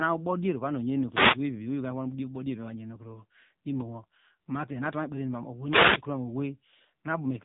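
A speech clip that sounds buzzy, synthetic and muffled throughout, with nothing above 3.8 kHz, which is heavy damage from the AMR narrowband mobile codec at a low bitrate, consistent with about 6.7 kbps. From 1.09 to 1.40 s a brief swish of static is heard, a wireless microphone noise hit where the radio signal faded and receiver noise rose.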